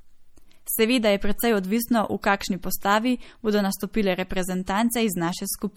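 From the start the speech carries plainly audible damage, likely from MP3 compression at a low bitrate; the sound fits something near 48 kbps. The treble is cut off and weak detail flickers, giving a watery, swirly texture. On a spectrogram this shows as a flat ceiling with patchy, blinking upper bands.

At 4.66 s a pre-echo puts a short hiss about 16 ms ahead of a sharp attack, softening its edge. The waveform shows low noise rising before the onset, and the spectrogram shows a smear ahead of it.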